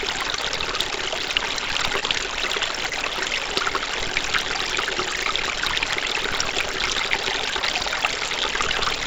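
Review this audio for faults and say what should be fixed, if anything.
A block size mismatch (padded) runs through the whole clip. A steady buzz at about 38.3 Hz sits under the sound, and everything plays at 0.889 times normal speed with its pitch barely changed. This fits one stage writing 1024-sample blocks into a stage that reads about 1152, with the shortfall in each block filled with silence. A sample-rate mismatch would also change the speed, but it would shift the pitch and add no buzz. Making the writer and reader agree on block size, or buffering between them, prevents it.

Short concealed packet loss occurs three times, at 0.36 s, 2.00 s and 2.90 s. Each is a brief smear of about 40 ms, where roughly 20 ms of audio was missing and was bridged by extending the preceding sound before blending back. These are isolated, irregular events rather than part of the steady buzz, and they smear instead of cutting out, which separates them from hard dropouts. 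A larger jitter buffer or forward error correction on the call link would prevent these gaps.

The call path's G.722 coding leaves nothing above 8 kHz.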